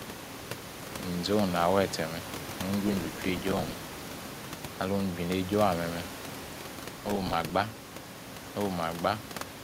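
The processor fell behind its audio deadlines twice, from 2.87 to 3.94 s and again from 6.98 to 7.50 s. It missed about 40 and then about 20 short buffers, around 5 ms each, and filled every gap with a stale repeat of old audio with hard edges. The result is processor overload crackle: a gritty, tearing burst laid over the speech that stops as soon as the load clears.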